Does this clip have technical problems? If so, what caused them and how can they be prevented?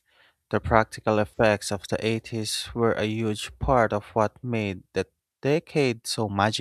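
No, this clip has no technical problems, so there is nothing to prevent.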